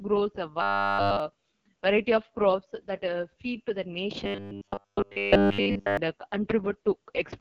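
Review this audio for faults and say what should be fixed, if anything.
The whole clip sounds rough and raspy, with a thin, hissy top and nothing above about 7 kHz. This is the AMR wideband (HD Voice) codec at 6.6 kbit/s, its lowest rate. At that rate the pulse-driven vocal tract model can't follow the speech closely, and the band above 6.4 kHz is filled only with shaped noise. Encoding at 12.65 kbit/s or higher would prevent this damage.

From 0.62 to 1.20 s, and again from 4.24 to 5.97 s just after "uh feed to the", the speech collapses into a rigid, metallic buzz at 100 Hz. This is robotic sound from repeated short buffers. The likely cause is playback looping the same 10 ms chunk while incoming audio is skipped. All of the first stretch is repeated, and most of the second. A larger jitter buffer or proper packet loss concealment would prevent it.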